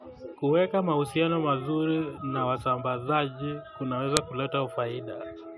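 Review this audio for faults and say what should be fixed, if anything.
At 4.17 s the speech is interrupted by a single sharp, loud click: a file header played as audio. It marks a join where a second WAV piece was appended with its header still attached, so those header bytes were read as samples. What separates it from an ordinary edit click or dropout is that it doesn't depend on the level or waveform at that moment. Strip headers from every piece before concatenating or streaming.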